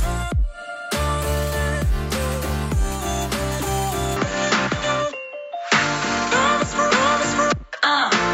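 At 4.17 s the sound abruptly turns duller and stays so to the end, with nothing above about 7.6 kHz, a level shift of a few dB and a new, faint background noise, with no gap at the switch. This is likely an input switched to a poorer device; the change in band, level and noise together sets it apart from a simple filter.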